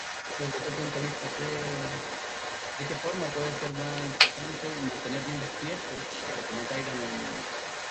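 From the very start and through to the end, a second copy of the speech trails the first by about 227 ms, sitting at roughly the same loudness as the original, so the speech is heard doubled. This is an echo leak, likely from a far end playing the call over a loudspeaker whose echo canceller failed to strip out what its microphone caught. The returned copy carries the same Opus coding as the rest of the call.

At 0.54 to 0.58 s the speech briefly sags by a few dB for about 40 ms, a small, quick dip rather than a full cut. This is speech suppressed in double talk: with both sides sounding at once, the echo canceller likely could not tell the local talker from the returning echo and pulled the level down on both.

At 5.95 s a sliver of about 20 ms drops out of the speech and is filled with soft, steady noise before the sound resumes. This is sound dropped by the voice detector, likely the sender's detector judging that instant as background and pausing transmission, which fits Opus discontinuous transmission, so the receiver briefly substituted comfort noise.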